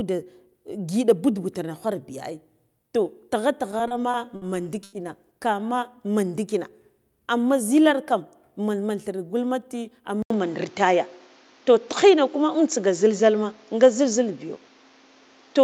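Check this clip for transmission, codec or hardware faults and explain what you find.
The speech in this clip has four transmission and hardware faults: a stutter, a single stall, a speed-up, and a change of input device.

Between 3.71 and 4.44 s there are repeated stalls (stutter). Packets arrived late, so the jitter buffer ran dry five times and the receiver extended the last sound, 140 ms in all with the longest gap 60 ms. On a spectrogram, harmonics flatten into short frozen stretches, and the speech drags and judders.

At 4.84 to 4.95 s a short stall from a late packet holds one sound for 90 ms while the receiver waits, then resumes where it left off. The waveform shows a repeated, slightly decaying cycle pattern, and the sound is audibly held with a faint buzz or dip.

From 8.19 to 8.91 s a jitter buffer speed-up trims about 40 ms of surplus buffered audio in small pitch-period cuts, playing at 105% speed. 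Pitch stays unchanged on the spectrogram while syllables compress slightly, so delivery sounds faintly hurried.

From 10.22 s to the end the input switched to a poorer device, likely another microphone or a headset profile. An 80 ms silence marks the switch. Afterwards the spectrogram shows a narrower band and a noise floor about 35 dB below the speech. The level shifts by about 5 dB, and the sound turns duller.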